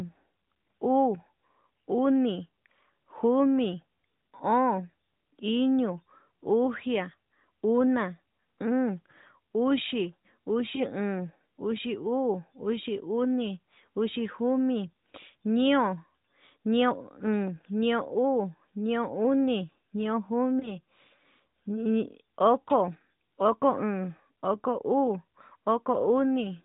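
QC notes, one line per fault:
10.76–10.84 s and 20.60–20.71 s, lost AMR speech frames: each brief dip or warble fits a single lost 20 ms frame. The decoder repeats the last good pitch and vocal tract settings at falling gain, over AMR-NB's 4 kHz-limited band. On a spectrogram, harmonics smear flat and fade. In the waveform, amplitude sags briefly.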